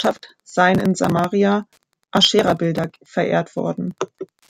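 A speech recording with Wi-Fi interference running the whole way through: a faint, steady ticking, roughly ten ticks a second, sitting somewhere around 50 dB under the talker. The spacing works out to 102.4 ms, which is the standard beacon interval for a Wi-Fi access point. A radio was close enough to the audio circuitry that each beacon burst got rectified into the signal path and came out as a click.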